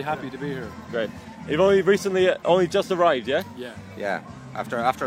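No technical faults can be heard anywhere in the audio.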